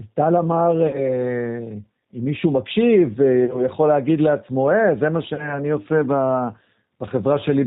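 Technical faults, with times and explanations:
Throughout, G.729 codec: the speech is band-limited with nothing above 4 kHz, and has a plainly audible rough, synthetic edge. This fits an 8 kbit/s G.729A stream, which resynthesises each 10 ms frame from a vocal tract filter, a pitch predictor and a handful of pulses instead of sending the waveform itself.
0.87–1.15 s, 3.45–3.62 s and 5.34–5.57 s, VoIP packet loss concealed by the speech codec: about 60 ms of audio goes missing in the first gap and about 40 ms in each of the others, which points to lost 20 ms packets. The decoder stretches its last pitch and filter into a fading buzzy tone or coloured noise, and because each frame builds on the previous one, the sound stays weak or distorted past each gap.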